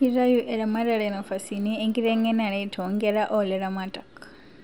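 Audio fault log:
Throughout: resampler restarted on every block. The converter handled each 50 ms block in isolation, so every block edge carries a small error, audible as a 20 Hz ticking buzz under the speech. The upsampling appears to be from 24 kHz to 48 kHz.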